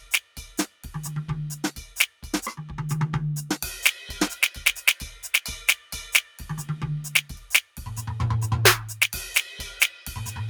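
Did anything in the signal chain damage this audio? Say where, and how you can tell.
Yes. A speech-oriented noise suppressor at the call-processing stage was left running on this music. It treats sustained tones and decays as noise, so level swings by around 10 dB and the sound pumps, flutters or thins out. On a spectrogram, held partials fade while attacks stay bright.

The suppressor also cut specific passages: 0.00–0.85 s and 2.08–2.24 s (about 11 dB), 5.76–5.92 s and 6.23–6.41 s (about 9 dB), 7.62–7.78 s (about 11 dB), and 9.90–10.07 s (about 7 dB). The waveform envelope shows these dips.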